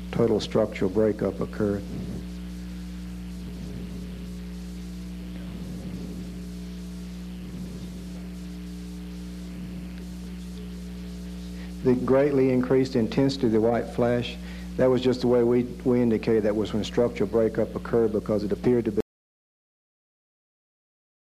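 The input signal was likely lost from the recorder at 19.0 s, with silence written from then on. The result is an audio dropout to silence: the sound stops abruptly mid-flow and stays in dead silence, with no room tone, for the final 2.3 seconds.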